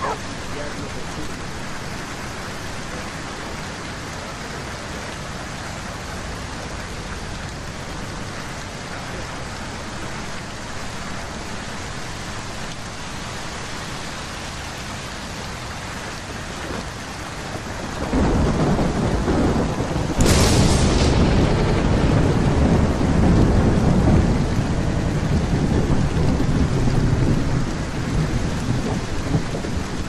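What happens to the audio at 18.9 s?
Nothing goes wrong at 18.9 s; the audio is intact there, with no dropout, click or other fault.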